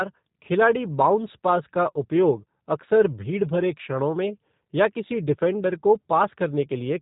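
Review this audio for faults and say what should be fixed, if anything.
The speech went through a G.729 codec for its whole length. The sound points to an 8 kbit/s link, with each frame rebuilt from a vocal-tract filter, pitch predictor and sparse pulses. Nothing above 3.8 kHz survives, leaving plainly audible roughness and a synthetic edge. Carrying the call on a wideband codec such as Opus or G.722, or recording locally, would prevent this.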